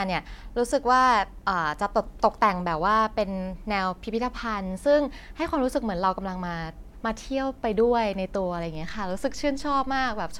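At about 8.75 s there's a DC step: the waveform's zero line suddenly jumps by about -36 dBFS and holds there until the end. You hear it as a single low thump at that moment, while the speech itself carries on unchanged underneath.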